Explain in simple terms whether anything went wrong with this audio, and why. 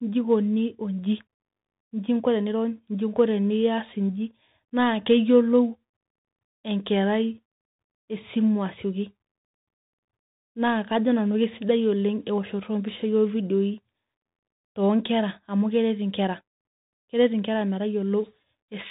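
The whole recording went through a Bluetooth CVSD headset codec, so the speech sounds muffled, with nothing above 3.8 kHz, scratchy s sounds, and a grainy hiss underneath.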